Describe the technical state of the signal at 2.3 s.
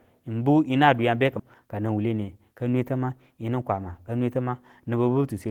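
At 2.3 s the jitter buffer had built up more audio than its target and was draining the excess, a jitter buffer speed-up running from 1.97 to 2.39 s. Small pitch-period slices totalling around 50 ms were cut, so the speech plays about 11% fast at unchanged pitch and sounds briefly hurried.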